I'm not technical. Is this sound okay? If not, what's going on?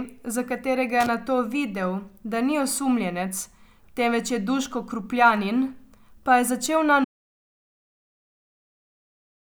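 No. Just after the start, at about 1.00 to 1.09 s, there's a brief scratchy crackle over the speech. That's loose connector crackle: somewhere in the cable or plug, a worn or dirty contact is wobbling, so the signal keeps flickering on and off for a split second. Each tiny break and reconnection makes a click, and a rapid run of them sounds like scratching. It's short, but it points to a connection that needs reseating, cleaning or replacing.

The bigger problem comes at 7.05 s, when the speech stops mid-flow and the rest of the clip is dead silence, with no background hum or room sound at all. This is an audio dropout to silence. The likely cause is that the microphone or its link was lost, or something muted it, while the recorder kept running and filled the gap with nothing. Whatever was said in those last seconds wasn't captured and can't be recovered.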